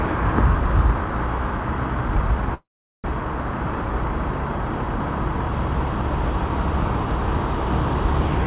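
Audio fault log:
2.54–3.06 s, call audio freeze: a short buzzy continuation fades into 0.41 s of silence, then the sound resumes where it stopped, 0.5 s late, likely because delayed packets emptied the jitter buffer. Spectrogram: smeared, decaying energy, then a blank gap. Waveform: tapers to flat.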